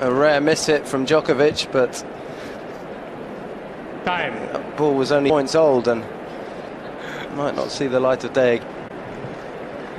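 At 5.30 s and 8.62 s, compressed frames skipped: whole 32 ms frames go missing and the audio leaps ahead roughly 0.4 s, then 0.3 s.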